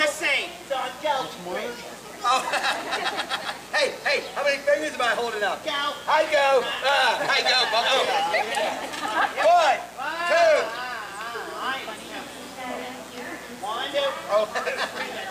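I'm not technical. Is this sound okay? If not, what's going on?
No. A mains buzz runs from start to finish: electrical interference from the 60 Hz power supply, heard as a steady, raspy hum sitting beneath the sound.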